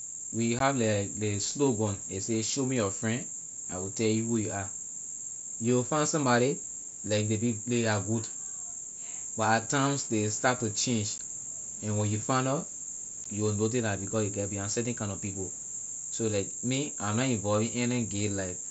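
Three brief dropouts show up here, and they're unconcealed Bluetooth headset packet loss. At 0.59 s, just before "like ley slogan ley", at 11.18 s right after "ley start to change", and at 13.24 s between "when you find nor" and "you will notice la", about 15 ms of speech simply vanishes, which fits a couple of lost packets on the headset link. Nothing fills the gaps, so you hear hard-edged little holes in the speech over the wideband mSBC link.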